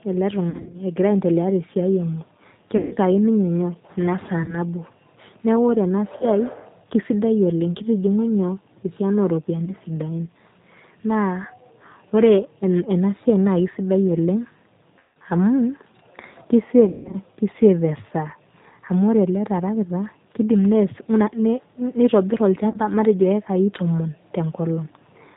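Rough, slightly synthetic speech with nothing above 4 kHz runs through the whole recording, the plainly audible mark of the G.729 codec. At 8 kbit/s it rebuilds each 10 ms frame from a vocal tract filter, a pitch predictor and a few pulses, discarding fine detail.

Short stretches of buzzy, smeared tone that fade and leave the voice weak for a moment come from VoIP packet loss concealed by the speech codec. They occur at 0.50–0.79 s, 2.77–2.96 s, 4.44–4.57 s, 6.17–6.26 s, 9.65–9.73 s, 14.99–15.16 s, 16.85–17.17 s and 22.70–22.78 s. Each time the decoder extends its last pitch and filter with falling gain, and recovery lags because every frame builds on the previous one. The largest losses are around 0.5 s, with 160 ms missing in short runs, around 15.0 s, with 160 ms missing, and around 16.9 s, where 220 ms is lost, including one unbroken 160 ms gap.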